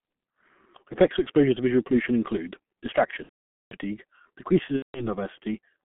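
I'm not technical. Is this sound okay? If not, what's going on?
No. The speech passes through the G.723.1 codec, an old internet-phone format. It keeps only a narrow band, roughly 150 Hz to 3.4 kHz, and squeezes the voice hard. So it sounds muffled and hoarse throughout, with smeared consonants.

There is also VoIP packet loss concealed by the speech codec. Chunks of audio went missing, and the decoder guessed by stretching the last sound. From 3.23 to 3.74 s, nearly half a second, this is drawn out for a moment and then goes silent. Again from 4.76 to 5.11 s, right after "decreases in", it happens briefly.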